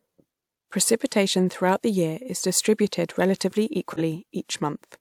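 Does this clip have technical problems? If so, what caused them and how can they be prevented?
Yes. Right after "year is distributed relatively", from 3.93 to 4.00 s, a short, fairly loud burst cuts through the speech. It's a corrupt frame decoded: flipped bits in roughly one compressed frame made the decoder place energy at wrong frequencies. Error detection with concealment or retransmission prevents this.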